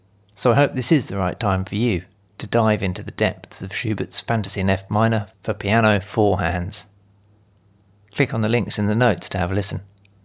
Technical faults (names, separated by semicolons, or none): none